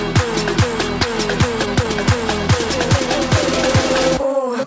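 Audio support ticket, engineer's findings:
Skip ahead at 1.02–1.04 s: playback jumps forward with no fill, roughly a second of audio gone and the two sides joined almost directly. Probable component is the jitter buffer discarding a backlog on overflow, cutting delay by about a second in one step.

Jitter buffer speed-up, three stretches: 1.05–2.0 s at 120% speed (roughly 200 ms removed), 2.47–3.62 s at 104%, and 4.17–4.64 s at 109% (around 50 ms each). Audio runs faster at unchanged pitch, hurried in the 120% and 109% stretches. Buffer trimming repeated pitch-period slices to drain excess delay.

The call path's band limit of nothing above 8 kHz, consistent with G.722, applies throughout.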